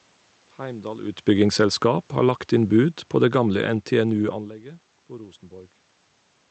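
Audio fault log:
1.33 to 4.42 s, automatic gain falling: the speech and the room noise behind it sink together by about 5 dB over roughly three seconds, a slow fade. The gain control judged the input too loud, or its background noise too strong, and lowered its gain gradually.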